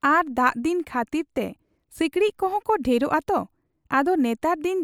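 No technical faults can be heard anywhere in this speech.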